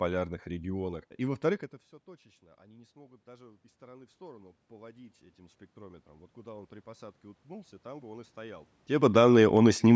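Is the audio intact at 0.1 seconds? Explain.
Yes, the audio at 0.1 seconds is intact, with no fault in the sound at that moment.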